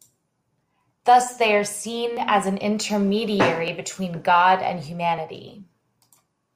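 Two independently clocked devices likely drift by around 700 ppm, causing clock drift buffer slips: about four regular clicks in the speech, every 1.51 s from 0.66 to 5.18 s.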